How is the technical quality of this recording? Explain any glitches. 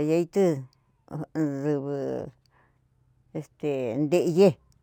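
The recording carries one fault that runs through the whole speech clip: imaging from linear upsampling. The sound was raised to a higher rate by joining samples with straight lines, which fits a conversion from about 22 kHz up to 44.1 kHz. That weak filtering dulls the top of the original band and leaves a faint mirrored copy of the spectrum from 11.03 to 22.05 kHz, roughly 40 dB below the signal. It is heard as a thin metallic shimmer on sibilants. On a spectrogram, the energy below 11 kHz is reflected as a pale, upside-down ghost above that line.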